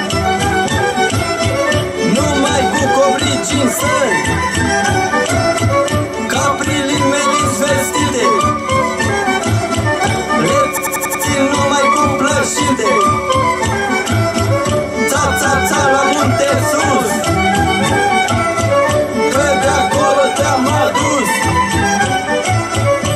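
From 10.77 to 11.24 s there is a system hang loop. The system froze while the hardware kept cycling one buffer. A 93 ms slice repeats five times, about 10.8 times per second, a machine-gun stutter. This fits a 4096-sample buffer.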